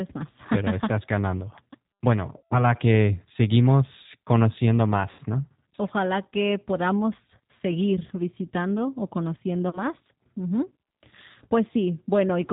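The whole speech clip runs through a G.729 codec at 8 kbit/s, and the damage is plainly audible: nothing above 4 kHz survives, and the speech is rebuilt from a filter plus a few pulses per frame, so it sounds rough and a bit synthetic.

There are three spots of VoIP packet loss concealed by the speech codec. The first runs from 2.37 to 2.72 s, ending right before "que seguimos conociendo", and covers about 140 ms of missing audio. The second is from 5.11 to 5.20 s, just after "que seguimos conociendo", with about 80 ms missing. The third is from 9.69 to 9.80 s, after "podamos seguir visitando o", with about 40 ms gone. In each gap the decoder keeps stretching the last pitch and filter at falling gain, giving a buzzy or noisy smear that fades, and the speech stays a bit weak for a moment after the audio returns.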